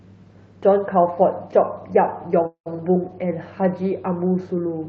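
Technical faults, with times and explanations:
2.47–2.68 s, call audio freeze: the speech stalls, its last sound stretched into a fading buzz that goes silent for about 0.1 s, then resumes where it stopped, likely from delayed packets draining the jitter buffer. Unlike a dropout, nothing is skipped; everything after arrives 0.19 s late.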